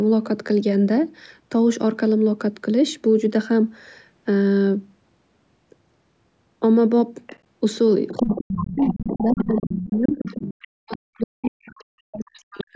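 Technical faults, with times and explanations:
7.27–7.39 s, 8.09–11.66 s and 12.40–12.63 s, other side's voice leaking through: a second, fainter voice sits under the talker. It appears as brief scraps of around 25 dB down at 7.27 s and 12.40 s, and as a long stretch only about 10 dB down from 8.09 s. This is likely residual loudspeaker echo the canceller failed to remove. On a spectrogram, extra harmonic stripes with their own pitch contour overlap the main voice's bands.
8.12–10.31 s and 10.67 s to the end, speech suppressed in double talk: while the leaked voice is present, the talker's level collapses in pieces, dipping by about 30 dB in the first span and around 40 dB in the second, roughly two seconds each. This is likely the echo canceller treating both voices as echo and attenuating everything. The waveform shows gouged, shrinking envelope sections, and the spectrogram shows the talker's harmonics fading or vanishing below the 8 kHz ceiling.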